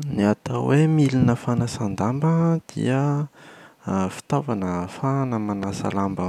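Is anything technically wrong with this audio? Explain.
Yes, there's one clear problem. At 5.63 to 5.65 s a single loud pop lands on top of the speech, peaking roughly 10 dB above it, while the speech carries on underneath. It's most likely a sudden voltage step or spike, say from a connector, a switch, static or a driver hiccup, getting into the signal. The downstream circuitry shapes that spike into a short, sharp thump-like click.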